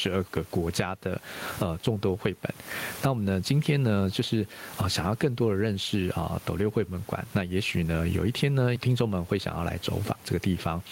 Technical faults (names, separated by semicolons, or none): gain pumping